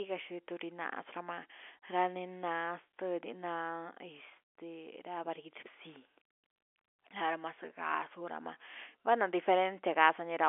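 No technical faults can be heard anywhere in the speech. The G.711 telephone coding shows as a narrow line band of about 300 Hz to 3.4 kHz with nothing above 3.8 kHz, and its level-following quantisation noise is faint at most.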